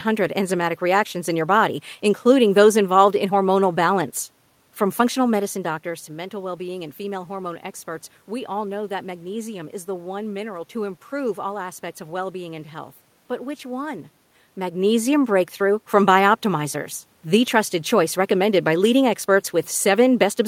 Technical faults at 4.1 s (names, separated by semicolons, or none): none